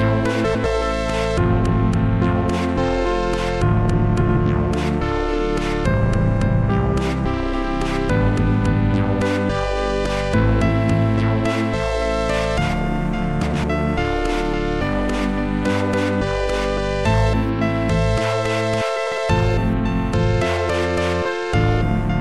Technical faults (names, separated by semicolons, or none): frames out of order